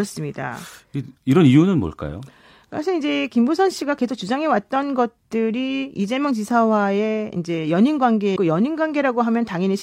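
At 8.32 to 8.36 s, damaged data in the compressed stream makes the decoder lose sync, giving a brief disruption that shows as a broken waveform.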